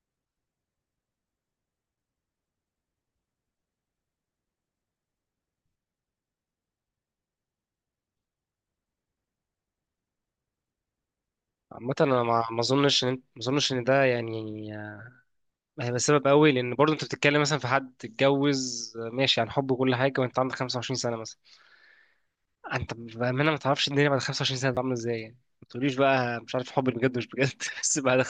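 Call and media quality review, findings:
Repeated buffer, 24.75–24.77 s: brief buzzy stutter in the speech, the same 10.7 ms segment played twice more with hard joins. Playback buffer underrun; repeat length fits a 512-sample buffer. About 20 ms of audio lost at that point.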